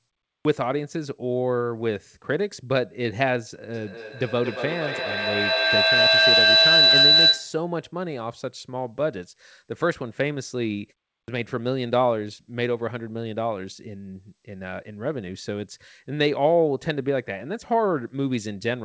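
Speech carried over a call path, band-limited at 8 kHz in a way that fits a wideband G.722 codec. Clipped starts after a pause occur at 0.40 s and 11.23 s. Each time about 50 ms of onset is lost after a silence of roughly 0.4 s, as the output device wakes. From 3.74 s to 7.69 s a feedback howl builds near 4 kHz, peaking about 8 dB above the speech and pulsing around every 200 ms. The howl comes from a microphone-to-loudspeaker loop between two devices in the same room.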